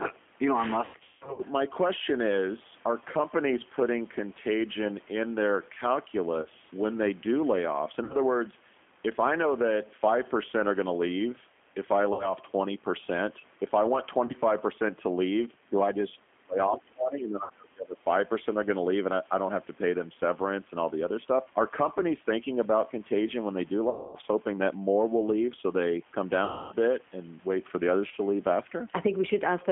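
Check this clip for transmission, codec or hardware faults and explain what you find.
Two faults are present: the speech went through the G.729 codec, and it suffered VoIP packet loss concealed by the speech codec at eight points.

G.729 codec, throughout: the voice was coded at 8 kbit/s, which fits G.729A. The codec resynthesises each 10 ms frame from a vocal tract filter, a pitch predictor and a handful of pulses instead of keeping the waveform. The line passes only about 200 Hz to 3.4 kHz, so the sound is thin and boxy, with plainly audible roughness and a synthetic edge on the voice.

VoIP packet loss concealed by the speech codec, at 0.85–1.43 s, 6.42–6.48 s, 8.04–8.15 s, 12.13–12.34 s, 14.26–14.33 s, 17.44–17.51 s, 23.90–24.15 s and 26.45–26.76 s: packets went missing and the decoder filled each gap by repeating its last pitch and filter settings at falling gain. The lost spans fit 30 ms packets. 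The short gaps of 30 to 60 ms are brief buzzy smears. The first event scatters 390 ms of loss over 540 ms, with its longest run at 180 ms. That event and the 240 ms and 270 ms losses near the end stretch the voice into a fading drone, and because the decoder carries its state forward, the voice stays weak and garbled for a moment after each gap.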